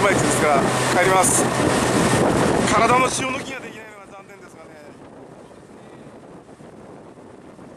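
From 2.93 to 3.95 s there's zipper noise: the level drops by about 25 dB in raw 1 dB steps, roughly 40 a second, with no smoothing. Each jump leaves a tiny click, so you hear a fast ticking zip riding on the sound.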